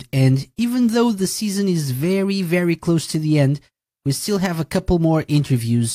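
Nothing goes wrong anywhere in this bit of speech, so there's no technical fault to point to.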